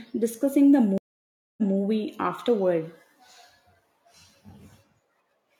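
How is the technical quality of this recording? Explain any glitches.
The recording has one glitch, a stream reconnect between 0.98 and 1.76 s. The connection dropped, leaving 596 ms of silence, then a fresh decoder picked up the speech 186 ms earlier, repeating a short stretch with a muted or faded onset. On a waveform or spectrogram this appears as a flat, empty gap followed by a soft ramp back into signal.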